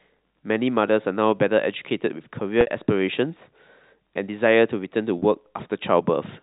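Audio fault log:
2.61–2.67 s and 5.19–5.22 s, packet loss with pitch repetition: a brief held, buzzy tone replaces the sound as the receiver repeats the last pitch period to cover 60 ms and 30 ms gaps.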